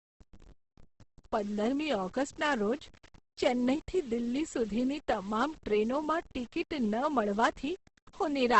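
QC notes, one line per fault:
throughout, low bit depth without dither. The speech carries a grainy, gritty distortion that moves with it and is strongest on quiet syllables and word tails. Low-level detail breaks up and sputters between coarse steps. The error sits roughly 30 dB below the speech. The grain fits rounding to about 7 bits with no dither to break up the error, which is likely the cause. The rounding error tracks the signal instead of forming a steady hiss.
throughout, Opus compression. The speech sounds rough, noisy and grainy rather than swirly. The damage is heavy. Nothing is heard above about 8.2 kHz, so the top end is dull and the sibilants lack air. This fits Opus in its music mode at a very low rate, around 12 kbps, which is likely the cause. Short of bits, the encoder keeps each band's energy but fills its detail with folded or noise-like content.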